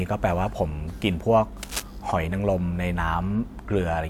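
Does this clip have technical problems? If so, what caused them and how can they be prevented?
Yes. Cable scratch noise rustles over the speech from 1.63 to 1.82 s, just under speech level. It likely comes from a worn cable or connector being moved, so its contact resistance jumped erratically. A spectrogram shows a ragged broadband smear, and the waveform shows jagged spikes. Replacing and securing worn leads prevents it.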